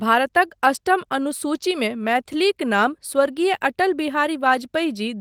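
Nothing in this speech clip stood out as a technical problem on listening.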